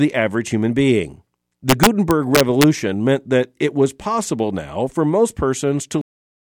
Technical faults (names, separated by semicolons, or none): integer overflow; cut-off end